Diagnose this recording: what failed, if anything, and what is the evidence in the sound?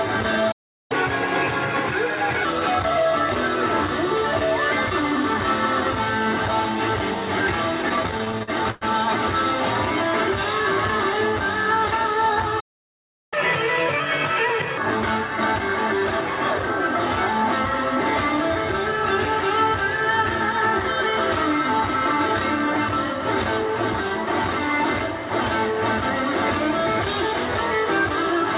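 Silence cuts in at 0.51 s for 0.38 s and at 12.60 s for 0.72 s: a playback stall, likely the player starving for data or blocking.

Right after each stall, speed and pitch jump: 0.92–2.45 s at 1.25x, about four semitones up; 13.34–14.78 s at 1.5x, about seven. This is catch-up at higher speed, as the player resamples its backlog to recover time.

From 7.82 to 8.84 s the sound drags and stutters through twelve brief holds, the longest 98 ms. These repeated stalls (stutter) come from late network packets repeatedly emptying the jitter buffer, which stretched the last sound.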